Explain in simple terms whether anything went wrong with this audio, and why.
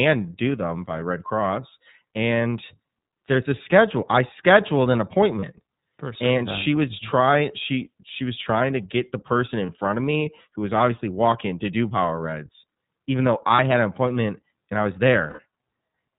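The whole recording has gone through the iLBC codec, a phone-call codec built for internet calls. It chops the speech into 30 ms slices and codes each one separately, keeping only the lower part of the sound. Everything above 4 kHz is cut off, so the voice sounds muffled and phone-like. The codec's handling is plainly audible too, giving the speech a slightly rough, synthetic edge all the way through.

There are also lost iLBC frames, where bits of the call simply didn't arrive. Each time, the decoder covers the hole by repeating the last bit of voice with some noise mixed in, so you hear a brief held, buzzy vowel. Short blips land at 5.39, 9.66 and 13.56 seconds, each about one 30 ms slice. A longer one runs from 15.27 to 15.40 seconds, which points to several slices lost in a row. Because each slice stands alone, the voice snaps back right away after every gap.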